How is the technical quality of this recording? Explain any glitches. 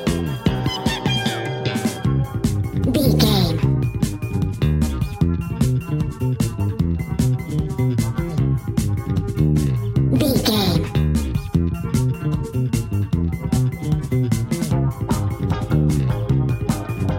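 The recording has one fault, present throughout. It plays back at the wrong sample rate, running 1.38 times fast and about 5.55 semitones sharp, which fits 32 kHz audio played at 44.1 kHz. Pitch and speed rise together, unlike a pitch shift, which leaves timing untouched.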